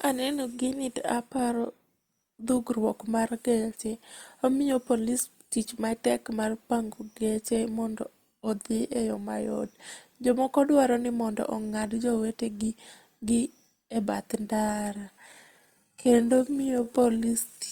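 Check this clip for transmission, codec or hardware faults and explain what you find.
One fault turns up near the end of this speech. From 14.44 s to 17.7 s, right after "jowetegi gi e bath", a time-stretched section begins. Software likely lengthened the audio by repeating short pieces while holding pitch, slowing it to two-thirds speed. The pace drops abruptly at the same pitch, and the speech drags.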